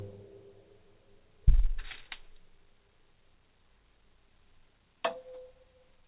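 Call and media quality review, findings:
No findings: the sounds come through the call path intact, with nothing above 4 kHz, which fits a G.711 A-law narrowband codec.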